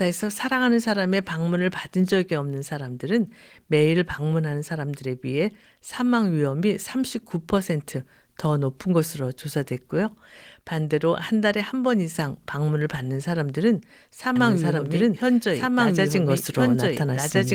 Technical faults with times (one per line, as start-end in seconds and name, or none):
14.36-17.55 doubled audio track